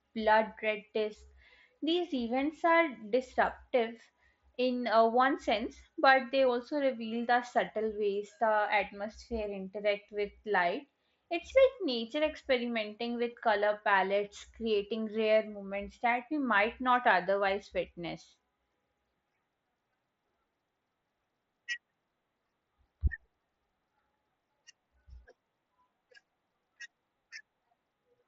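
Nothing stood out on listening to this speech recording.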